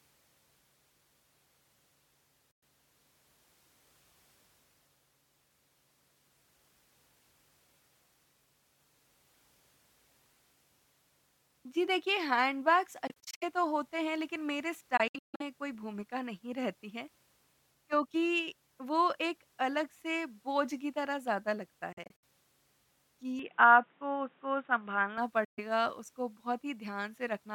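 At 2.51 s the speech cuts to silence for about 0.11 s and resumes further along, as if it had kept playing. Clusters of short holes follow at 13.07 to 13.43 s, 14.97 to 15.42 s (longest gap 0.15 s) and 21.92 to 22.24 s. These are likely Bluetooth dropouts, with packets missing their deadline, rather than edits, because the speech carries on in time across each hole. From 23.39 to 25.18 s the sound turns dull, with nothing above 3.8 kHz and a faint new noise floor. There is no gap and no level jump, so it points to the input switching to a poorer device rather than a filter. Another likely dropout of about 0.13 s follows at 25.44 s.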